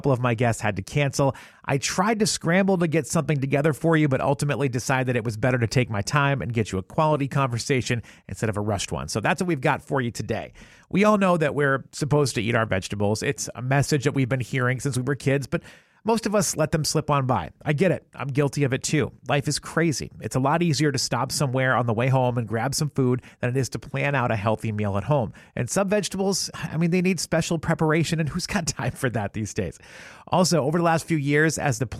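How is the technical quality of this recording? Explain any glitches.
The technical quality of the recording is good, and there are no glitches to explain.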